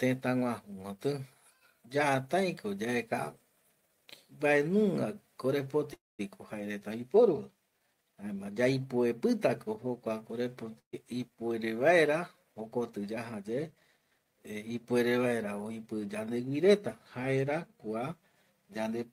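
From 5.93 to 6.21 s the speech stops: a brief held sound fades into about 210 ms of silence, then resumes exactly where it left off. This is a call audio freeze, likely delayed packets draining the jitter buffer, leaving the call about 254 ms further behind.

At 10.79 to 10.95 s a short burst of packet loss leaves a fading fill and about 100 ms of silence. When the speech comes back, roughly 140 ms of it has been skipped, because those late or lost packets were never played.

Between 12.52 and 13.33 s the speech sounds slightly hurried, running at 107% speed while the pitch stays the same. This jitter buffer speed-up comes from the receiver trimming short pitch-period slices, about 70 ms in total, to shrink an oversized buffer.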